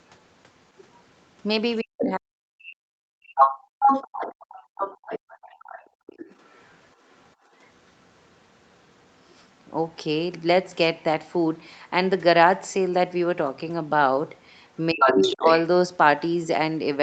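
At 0.77 to 0.86 s a faint second voice, far below the main speech, slips through, likely other side's voice leaking through from a loudspeaker the echo canceller didn't fully clear. Unlike the gating faults below, this adds a sound rather than removing one. From 1.82 to 3.49 s the main speech dips by up to roughly 40 dB for about 1.5 s in total. This is likely speech suppressed in double talk, because the talker and the far side overlap. Around 2.03 s a burst of the other voice, nearly as loud as the talker, cuts across the dip, which separates this suppression from a plain level drop. From 3.36 to 9.64 s the other voice leaks through again, likely for the same reason, this time as a long stretch somewhat quieter than the speech. Within that stretch the room sound briefly drops out at 5.89 to 6.07 s, by about 30 dB, and at 7.36 to 7.52 s, by about 16 dB. This is background gated by the echo canceller, and it differs from double-talk suppression because the ambience vanishes rather than the talker. 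From 14.76 to 15.59 s the leaked voice rises to match the speech, likely the same echo fault. Between 14.92 and 15.45 s the talker sinks by roughly 20 dB, again pointing to double-talk suppression.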